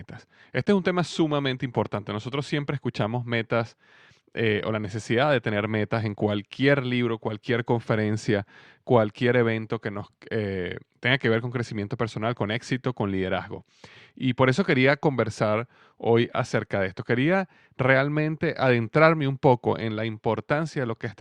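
No technical faults can be heard in this speech.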